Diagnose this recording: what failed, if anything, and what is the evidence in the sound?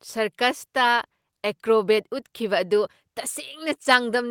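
No fault detected.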